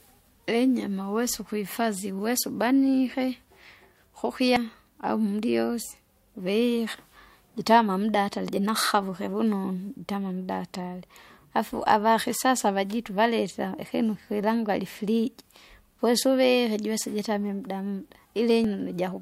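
Damaged data in a compressed stream at 4.56, 8.49 and 18.64 s: corrupted frames throw the decoder out of sync as it hunts for the next header, leaving brief blips in the speech.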